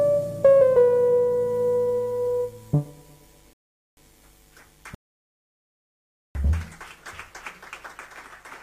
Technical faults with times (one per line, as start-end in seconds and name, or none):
3.53-3.97 rebuffering stall
4.95-6.35 rebuffering stall